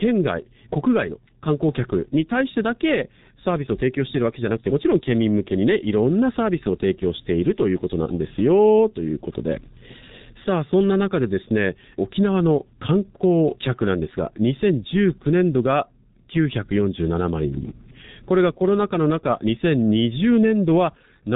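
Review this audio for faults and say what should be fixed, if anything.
The whole clip has been through a G.723.1 codec, and it shows: nothing above 3.8 kHz, and heavy damage leaves the speech muffled and hoarse with smeared consonants, which fits a very low rate around 6 kbit/s and coarse 30 ms frames. Route the call through a wideband codec instead.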